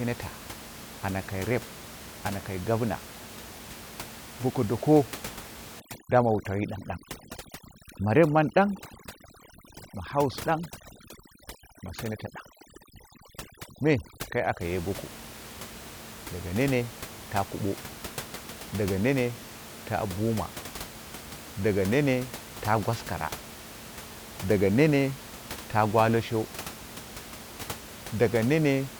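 From 5.8 to 14.61 s, overdone noise removal cuts frequency bands whenever they approach its noise estimate, taking quiet parts of the speech with them. The room noise, about 16 dB below speech elsewhere, drops and breaks up into twinkling specks until "ye goko".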